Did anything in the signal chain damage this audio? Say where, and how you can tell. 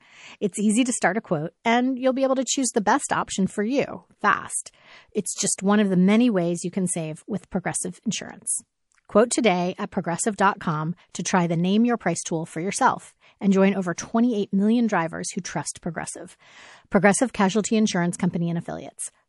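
Yes. MP3 compression runs through the whole speech clip at the codec stage. The sound is plainly damaged: watery, swirling texture, dulled treble, and s sounds that chirp metallically as weak frequency lines flicker on and off between frames. That fits a low bitrate of about 48 kbps, likely from an MP3 encode. With so few bits, the encoder cuts the top end and zeroes quieter detail rather than spending bits on it.

Pre-echo appears at 11.12 to 11.15 s and at 13.95 to 13.98 s, also at the codec stage. Before each sharp attack comes a short hiss, 32 ms and 27 ms long, rising about 19 dB and about 17 dB above the quiet floor. The attacks themselves sound smeared. The encoder spread quantisation noise meant for the loud onset across the whole transform block, filling the silence ahead of it. That fits long blocks kept throughout, with no switch to short ones.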